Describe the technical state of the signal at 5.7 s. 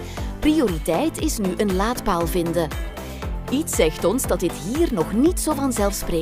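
Nothing at 5.7 s points to a technical fault; the signal is intact at that moment.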